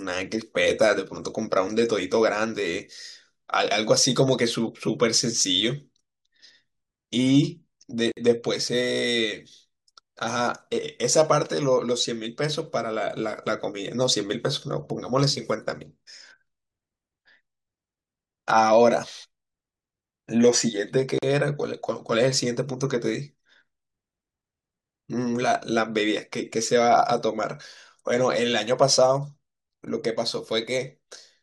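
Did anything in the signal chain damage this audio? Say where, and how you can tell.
Yes. At the codec stage, two gaps at a join of encoded pieces break the speech: about 52 ms of silence from 8.12 to 8.17 s, and about 41 ms from 21.18 to 21.23 s. The pieces were encoded separately, and each one's start-up delay and final-frame padding were left in when they were butted together. Unlike a network dropout, no speech is lost. The sound picks up exactly where it stopped, with slightly smeared edges rather than a hard click.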